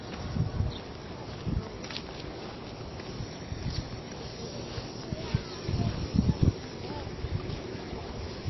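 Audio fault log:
Throughout: MP3 compression. The sound is watery and swirly, with nothing above 5.8 kHz, so the top end is dull and any sharp edges come out smeared. This is likely a low-bitrate MP3 encode around 24 kbps, where the treble gets cut and weak detail drops in and out between frames.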